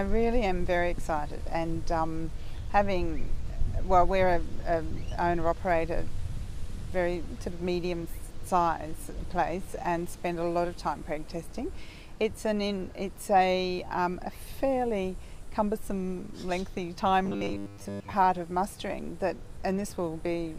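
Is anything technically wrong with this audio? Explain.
Yes. From 17.25 to 18.14 s there is robotic sound from repeated short buffers: a rigid metallic buzz near 100 Hz. Audio likely arrives too seldom, so a 10 ms chunk is looped for most of that span. Unlike mains hum, the buzz tracks the sound's shape, and there are no silent gaps.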